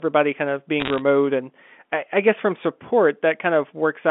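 Speech over a G.711 mu-law telephone path, band-limited to roughly 200 Hz to 3.5 kHz, with a burst of bit errors on the digital phone line from 0.80 to 0.99 s. Each flipped bit corrupts one sample, and hits on the sign or high-order bits produce sharp ticks, heard here as a short stretch of crackle over the speech at an error rate of about 0.7 percent.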